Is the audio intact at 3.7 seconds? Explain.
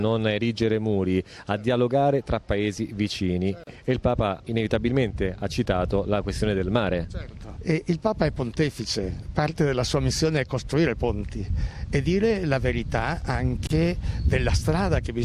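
No. Around 3.7 seconds there is a gap at a join of encoded pieces: separately encoded segments were spliced without trimming the encoder's start delay and final-frame padding. The sound drops out for about 35 ms, from 3.64 to 3.67 s, with smeared edges, then resumes where it stopped.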